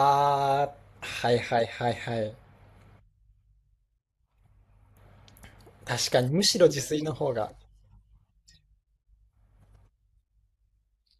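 No technical faults can be heard anywhere in the recording; the signal stays steady and intact throughout.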